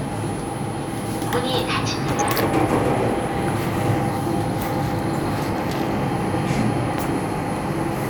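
From 2.09 to 2.37 s, and again from 5.21 to 5.53 s, the sound breaks into DAB burbling. Weak reception lets bit errors slip past error correction into the MP2 stream, roughly a few tenths of a percent of bits. Corrupted samples give short blips of noise in single sub-bands, and corrupted scale factors throw individual sub-bands up or down in level for up to a frame. A spectrogram shows scattered rectangular blocks in isolated bands, each lasting up to one frame. The waveform shows uneven bursts.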